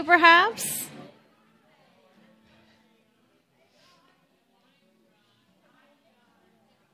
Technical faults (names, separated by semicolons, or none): none